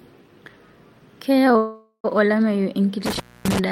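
At 1.57 s the packets carrying this speech were likely held up in transit, letting the receiver's jitter buffer run dry: a call audio freeze. Rather than drop out, the receiver stretches the last sound into a fading buzz or hiss lasting until 2.06 s, with about 70 ms of near-silence at its tail. When the packets arrive, the speech resumes exactly where it stopped, so nothing is lost, but everything after runs about 0.47 s late.

From 3.06 s to 3.59 s an intermittent contact opens: a loose cable or plug briefly breaks the signal path. For roughly 0.25 s the speech cuts out, and the break is bracketed by crackle as the contact opens and recloses. Faint hiss fills the space while the line is open, and the crackly edges give it a ragged, physical quality that sets it apart from a clean digital dropout.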